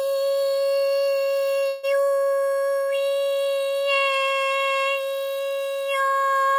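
At about 1.67 s there's a call audio freeze lasting until roughly 1.85 s. The last bit of sound gets stretched into a buzzy, fading smear for around 160 ms, with no drop to silence. Then the audio picks up exactly where it left off, so nothing is lost, but everything after that point runs about 160 ms late. The likely cause is packets getting held up in transit until the jitter buffer ran dry.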